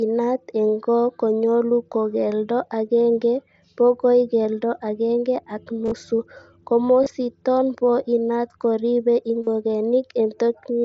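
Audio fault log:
5.85–5.92 s, 7.04–7.06 s, 9.44–9.47 s: concealed Bluetooth headset packet loss. Lost headset packets, 52.5 ms spread over 60 ms (longest run 30 ms), then 22.5 ms and 37.5 ms, are each filled by repeating a recent stretch of the waveform. The repetition gives a brief buzzy tone held at full level, with a slight warble as real sound resumes. On a spectrogram the patches show as repeated, evenly spaced harmonic bands; on the waveform they appear as copied cycles at unchanged amplitude.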